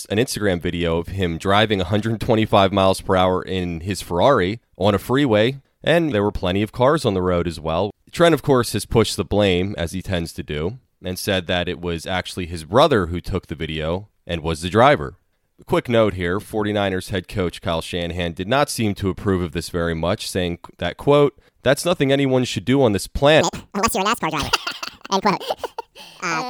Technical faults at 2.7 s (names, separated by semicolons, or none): none